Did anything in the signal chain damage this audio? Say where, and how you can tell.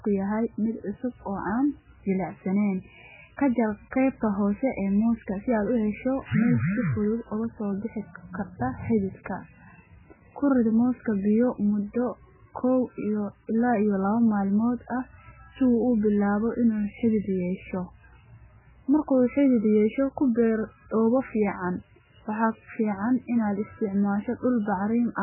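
Yes. The damage is in the codec stage and runs through the whole speech clip. Nothing is present above 3 kHz, so the top of the spectrum is cut off flat. The speech also sounds heavily watery and swirly. The likely cause is MP3 compression at a very low bitrate, around 8 kbps. With so few bits, the encoder cuts the treble at a fixed point. It also drops weak frequency lines, which then flicker on and off from frame to frame.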